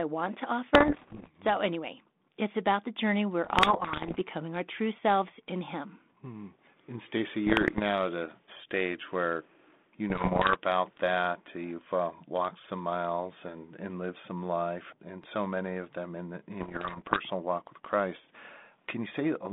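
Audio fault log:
0.74–1.29 s (after "want to"), 3.45–4.22 s (after "about the journey we're", ending before "our true selves in"), 7.47–7.80 s (ending before "at a stage where"), 10.10–10.62 s, 16.60–17.22 s: bit errors on an ADPCM link. Scattered flipped bits, on the order of one to two percent, knock the decoder's step size and predictor off track, so each hit rings on as pops and rasping bursts with jumpy level. Lost packets would leave gaps, but here the sound never drops out.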